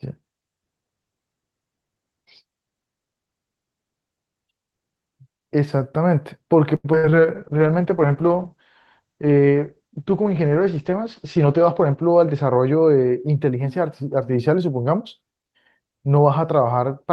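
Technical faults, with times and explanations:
6.75–7.27 s, repeated packet loss (robotic sound): four gaps in quick succession, the longest about 89 ms, each patched by stretching the previous sound, so nearly half this half-second is synthetic. The repeated fills give a choppy sound with pieces missing, unlike a single clean dropout.
7.36–13.34 s, call bitrate drop: the encoder's rate fell from 32 to 10 kbps, sitting at the bottom for about 4.2 s, and bandwidth narrowed from 12 kHz to 8 kHz. The speech turns muffled and watery, a steady coarseness rather than broken-up gaps.
11.24–12.33 s, jitter buffer speed-up: to shed excess buffered delay, the receiver cut out short pitch-period slices, roughly a tenth of a second in total, playing about 7% fast. The speech sounds hurried yet keeps its pitch, which separates it from a simple resampling error.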